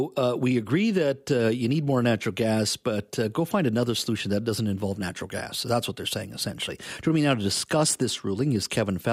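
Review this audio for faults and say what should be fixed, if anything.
Nothing needs to be fixed, as no faults can be heard in this audio.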